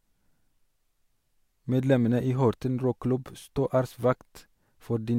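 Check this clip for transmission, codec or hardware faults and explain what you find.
Nothing in the speech points to a transmission, codec or hardware problem.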